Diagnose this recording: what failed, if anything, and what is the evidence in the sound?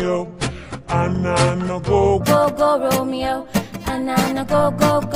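The opening section, from 0.0 to 2.21 s, was most likely rendered against the wrong clock at the editing or playback stage, so the samples were read out at 0.68 times their proper rate. Because speed and pitch are tied together in that case, the sound there is both slowed and lowered by about seven semitones, giving it a deep, dragging character until 2.21 s, where the correct speed and pitch return abruptly.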